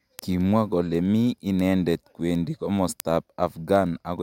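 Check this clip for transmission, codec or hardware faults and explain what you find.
One fault is present. From 0.19 s to 4.19 s there are word clock ticks, sharp clicks roughly every tenth of a second: the receiver's unlocked clock, off by around 200 ppm, slips one sample each time.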